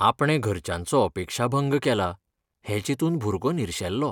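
Speech, with no technical fault to be heard anywhere in the recording. Nothing in the audio calls for a time or a cause to be noted.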